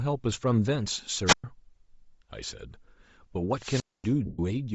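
Throughout the speech the upper spectrum sounds thinned and noise-filled, giving a grainy, breathy edge. This plainly audible damage is likely Bluetooth LC3 compression at a low rate, consistent with roughly 32 kbps in short 7.5 ms frames. The graininess is constant, not tied to events.

From 1.26 to 1.44 s comes a wireless microphone squelch dropout. The FM radio signal fades, so hiss swells, then the receiver mutes the output for about 115 ms before the speech returns. The rising static before a clean hole of near silence distinguishes it from a codec gap. A longer squelch dropout runs from 3.55 to 4.10 s, with the mute lasting about 240 ms.

From 4.25 to 4.39 s, lost LE Audio frames leave a 135 ms gap that the decoder fills by repeating the last spectrum with scrambled phase. Rather than hiss and a sudden mute, the sound smears into noisy texture and fades away.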